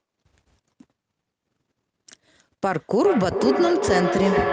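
At 2.69 s a feedback howl begins and runs to the end of the clip: a loop from loudspeaker back into microphone gains level on each pass, with a loop delay of roughly 0.4 s, narrowing to a tone around 400 Hz that peaks at about 1 dB below the speech.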